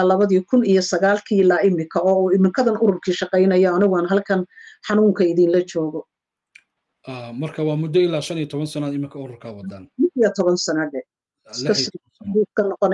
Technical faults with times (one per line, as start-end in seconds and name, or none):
none